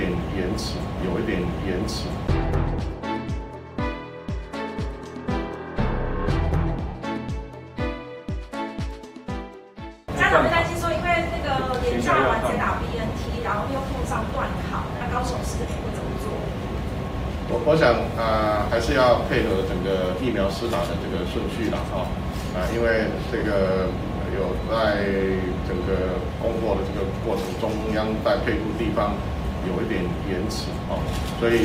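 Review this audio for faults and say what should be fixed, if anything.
Lost LE Audio frames appear four times: 6.88 to 6.95 s (70 ms), 14.97 to 15.01 s (40 ms), 23.38 to 23.42 s (40 ms) and 30.86 to 30.88 s (20 ms). The gap lengths fit 10 ms LC3 frames going missing. The decoder patches each gap by repeating the last spectrum with scrambled phase signs, so tones smear into a noisy wash. Unlike a plain dropout, there is no hard silence or click, just a brief hazy blur. The longest gap starts to fade toward quiet. Prevent this by strengthening the Bluetooth link: shorten the distance, cut 2.4 GHz interference, or enable retransmissions.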